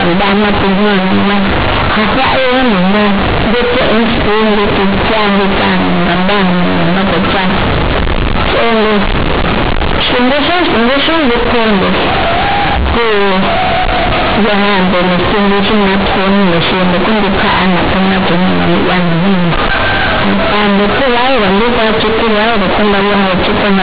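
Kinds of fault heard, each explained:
Companded audio read as linear: the speech comes out very loud and harshly buzzy from start to finish, with quiet passages blown up nearly as large as loud ones and thick noise filling the pauses. The cause is A-law bytes being played straight as linear 8-bit samples without expansion, so each sign change throws the waveform across about half its range. The telephone-band ceiling near 4 kHz from the underlying G.711 coding still shows through.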